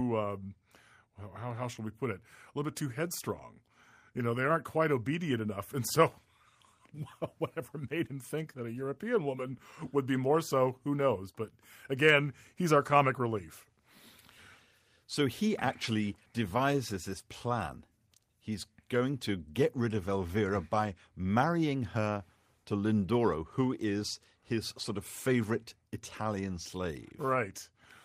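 Speech recording, no technical faults detected anywhere in the audio.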